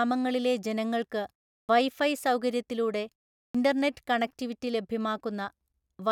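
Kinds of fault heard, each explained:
Clipped start after a pause: the output path idles during silence and needs time to resume, so the next onset is swallowed. Speech restarts abruptly at 1.61 s and 3.46 s, after pauses of 0.34 s and 0.38 s, losing 79 ms and 85 ms respectively.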